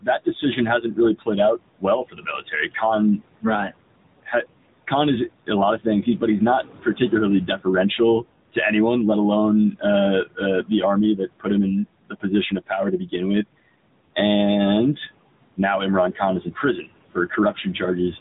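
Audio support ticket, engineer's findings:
Noise suppressor artifacts, throughout: room noise sitting about 16 dB under the speech gets pulled down by about 21 dB in pauses and swells back under speech. Per-frame band gating of the steady noise.

AMR narrowband mobile codec, throughout: buzzy, synthetic timbre, plainly audible. Hard band limit at 3.8 kHz, consistent with 8 kHz sampling. The pulse-excited vocal-tract model at a mid mode fits AMR-NB at about 10.2 kbps and swirls the residual background.

Speech cut by the noise suppressor at 0.01–4.33 s (about a second in total, drops to about 21 dB), 5.47–6.22 s before "he's not" (brief, about 9 dB), 6.82–7.99 s between "he's not" and "to anyone let" (about 15 dB), and 16.13–17.81 s (nearly half a second, about 21 dB). Soft consonants and endings misread as noise are swallowed.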